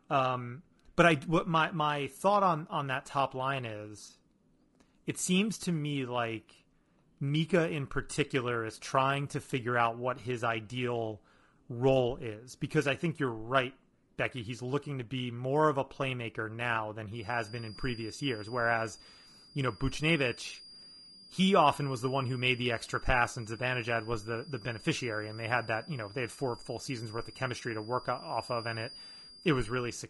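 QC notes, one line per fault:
Throughout: low-delay AAC compression. The speech is rough and grainy, with a noisy fill between pitch harmonics and a top band that sounds thinned and partly synthetic. This is likely a low-delay codec such as AAC-ELD. Its short frames, around 10 ms, resolve voice harmonics poorly and spend extra bits on framing. The density of the damage points to a low bitrate, in the region of 32 kbps, which leaves the degradation plainly audible.
17.08 s to 30.10 s: feedback whistle. A thin, steady tone at 4.8 kHz sits behind the speech from this point to the end of the clip. It stays roughly 20 dB below the signal and swells and fades slowly in level without building up. This is likely a loudspeaker-to-microphone loop running just at the edge of feedback. One frequency sustains there but never gains enough to run away into a howl.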